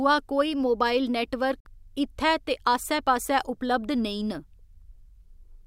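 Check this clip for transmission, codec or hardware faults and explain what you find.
One fault is audible in this speech. From 1.60 to 1.67 s the sound drops to silence. This is likely a Bluetooth dropout. Packets arrived too late and were discarded, which fits about two lost frames. The speech then resumes as if it had played on.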